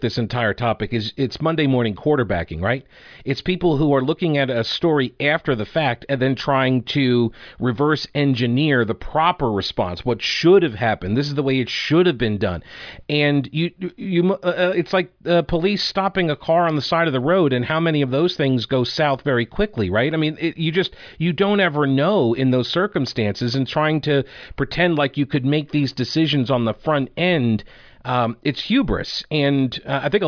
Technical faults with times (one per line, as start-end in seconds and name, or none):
none